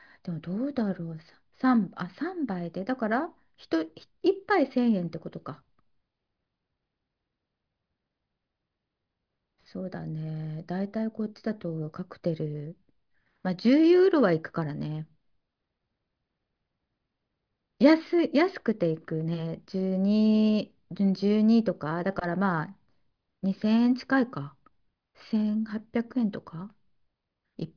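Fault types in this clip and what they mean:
No faults can be heard.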